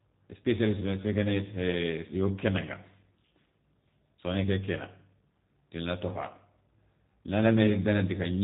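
From start to finish the speech sounds slightly rough and synthetic, with a buzzy, papery edge and nothing heard above about 3.8 kHz, so sibilants lose their hiss and the audio sounds muffled. This is plainly audible G.729 codec damage. The codec does not keep the waveform. It rebuilds each 10 ms frame from a vocal tract filter, a pitch predictor and a few coded pulses, which fits a bitrate near 8 kbit/s.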